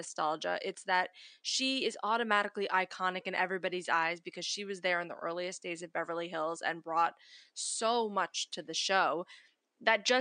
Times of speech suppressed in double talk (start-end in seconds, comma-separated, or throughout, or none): none